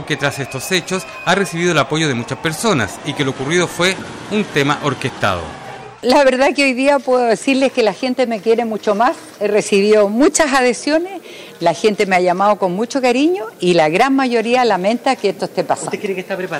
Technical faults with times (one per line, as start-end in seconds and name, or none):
0.00-16.59 hard clipping